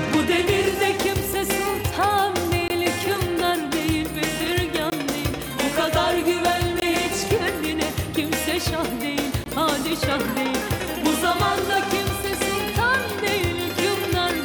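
The audio drops out four times, at 2.68, 4.9, 6.8 and 9.44 seconds. Each gap is a block of digital silence 20 ms long. The sound stops dead and comes back with no fade. The equal lengths point to an output buffer that was not filled in time.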